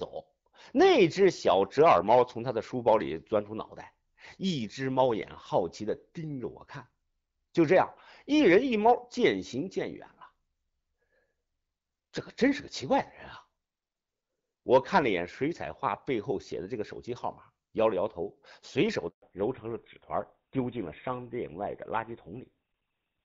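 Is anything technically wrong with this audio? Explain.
Yes. The speech has three kinds of fault, heard against a wideband phone call whose clear, lightly coded sound fits HD Voice at around 12.65 kbit/s.

Hard clipping: A brief crackle sits on the loud peaks from 7.72 to 7.82 s, then a longer, grittier edge from 8.47 to 9.25 s. The signal overshot what a stage in the chain could pass, by about 1 dB and then about 2 dB, so its peaks were sliced flat. Those squared-off tops add high harmonics that the ear hears as crackle rather than full fuzz, because the overload is small.

Handover gap: At 19.08 s the voice fades within a few tens of milliseconds and stays silent until 19.22 s, a 140 ms hole. The call was being switched from one network to another, and no speech frames arrived while the link changed over. Whatever was said in that window is simply missing.

Fallback to narrowband: From 19.22 s to the end the voice turns duller, boxier and rougher, with nothing left above 4 kHz. 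Right after the handover the call dropped out of wideband coding into an older narrowband codec, which fits GSM full rate at 13 kbit/s. That codec only carries the traditional telephone band, so the sibilance and airiness of the earlier part are gone.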